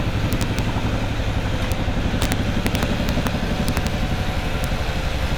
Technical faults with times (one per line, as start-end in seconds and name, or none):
0.33-0.59 integer overflow
1.72 integer overflow
2.22-3.27 integer overflow
3.68-3.87 integer overflow
4.64 integer overflow